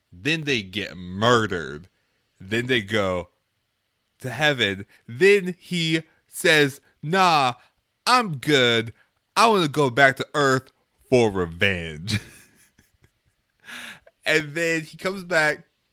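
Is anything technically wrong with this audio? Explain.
Yes. From 0.43 s to 14.4 s there are periodic USB or driver dropouts. Every 2.0 s, something blocks the USB bus or audio driver, and about a millisecond of speech is lost and replaced with silence. The result is about seven evenly spaced ticks that are audible over the speech.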